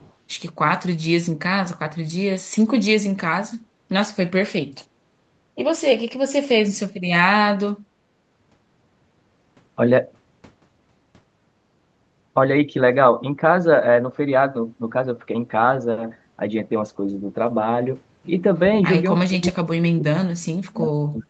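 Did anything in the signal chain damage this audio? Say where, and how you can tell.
Yes. In the call-processing stage, the first 0.13 s (0.00 to 0.13 s) carries a faint delayed copy of speech, around 30 dB below the main voice and trailing by 399 ms. That is likely an echo leak: the far end's echo canceller let loudspeaker pickup through.

From 19.26 s to the end at 21.30 s, the speech sinks and breaks up, dropping by roughly 40 dB at its deepest. This points to speech suppressed in double talk, likely the echo canceller mistaking overlapping talk for echo and attenuating both.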